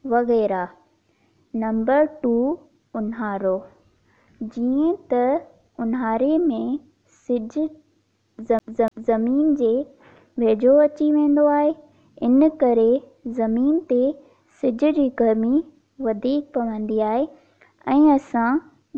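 From 8.59 to 9.17 s the audio sticks like a CD stuck on one turn: the laser jumps back a track, so the same 0.29 s fragment plays twice with a brief mute at each jump. On a waveform, identical blocks repeat, separated by thin silent gaps.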